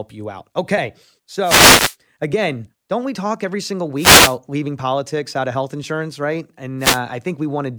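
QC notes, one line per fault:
1.42–1.96 s, 3.96–4.37 s and 6.79–7.00 s: wireless microphone noise hit, three of them, lasting about half a second, 0.4 s and 0.2 s. Each is a quick swish of static over the speech. The radio link to an analogue FM mic dips when reflected paths cancel the signal, so the receiver's own hiss comes up and partly masks the voice until the signal recovers.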